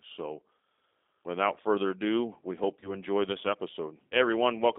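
Right from the start the speech runs through a G.729 codec at 8 kbit/s, squeezed into a line band of roughly 250 Hz to 3.6 kHz. The coder rebuilds each frame from a filter, a pitch guess and a few pulses, so it comes out rough and a little synthetic. Then at 2.80 s, just after "further ado we hope", you get VoIP packet loss concealed by the speech codec. About 20 ms is missing, which fits a single lost packet. The decoder stretches its last frame into a fading buzzy tone or coloured noise, and the sound stays weak until about 2.92 s, right before "enjoy this".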